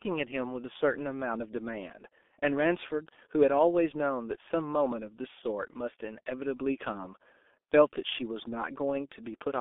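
From start to finish the speech carries heavy G.723.1 codec damage: everything sits in a narrow 250 Hz to 3.5 kHz telephone band with nothing above 3.7 kHz, so it's muffled and hoarse. Consonants smear together, which fits a low-rate stream around 6 kbit/s.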